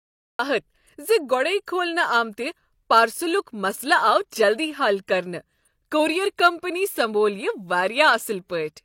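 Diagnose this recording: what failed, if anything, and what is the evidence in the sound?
The clip opens on dead digital silence, and at 0.39 s the speech appears abruptly at full level, already mid-sound, with no natural onset or fade-in. That is a cut-off start: capture or streaming began late, at the driver or buffer stage where recording is armed, so the first samples delivered were empty and the audio joins the utterance partway through. Whatever preceded 0.39 s was never recorded.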